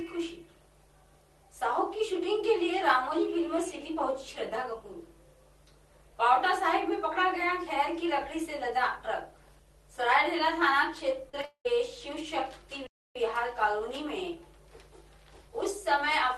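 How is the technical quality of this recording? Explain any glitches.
The recording has three kinds of glitches, all clustered between about 11.3 and 13.2 s. The audio has passed through a call codec, which fits Opus at a modest bitrate, and nothing is present above about 12 kHz.

Short concealed packet loss: At 11.29 to 11.35 s and 11.41 to 11.45 s there are two brief smeared, wobbly moments. About 40 ms and then 20 ms of audio never arrived, and the receiver bridged each gap by extending the preceding sound before blending back.

Long network dropout: From 11.45 to 11.67 s the sound turns into a fading artificial continuation, and the last roughly 90 ms is silent. The likely cause is a network dropout. About 0.2 s of audio was lost, so the sound resumes further along without that part.

Playback stall: From 12.87 to 13.16 s the output cuts out abruptly in mid-flow for about 0.29 s before continuing. 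This is likely a playback stall, where the player ran out of data or was blocked and produced silence until it recovered.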